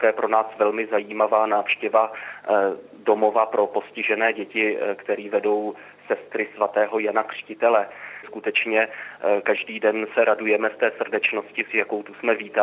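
No technical faults can be heard in the clip, so there are none to describe in time order.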